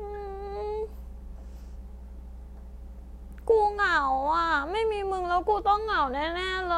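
A ground loop or nearby transformer is feeding the power line into the signal, laying a steady 60 Hz mains hum under the speech throughout, roughly 15 dB down.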